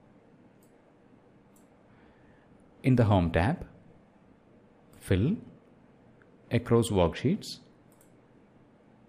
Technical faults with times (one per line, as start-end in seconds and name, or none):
none